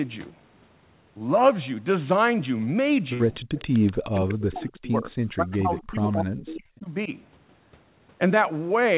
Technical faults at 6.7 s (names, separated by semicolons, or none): speech suppressed in double talk